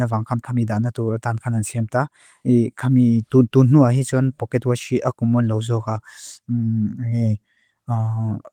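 No technical fault can be heard in this speech recording, which keeps a full audio band consistent with Opus voice compression running in its hybrid mode and shows only the light coding texture expected from it.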